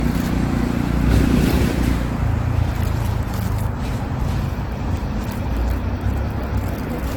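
Sounds, with generation loss throughout. The audio is swirly, smeared and hollow, and attacks blur. Nothing is present above 19.3 kHz. The likely cause is repeated AAC-LC encoding, about four passes at a rate that fits 96 kbit/s, with each pass adding fresh quantisation damage.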